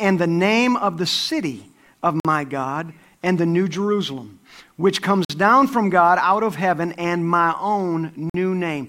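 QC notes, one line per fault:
2.20–2.25 s, 5.25–5.30 s, 8.30–8.34 s: gap between chunks. The speech cuts to hard-edged silence for about 48 ms, resuming with "down from" after the second hole. The 3.05 s spacing fits 3-second chunks with dead time inserted at each join.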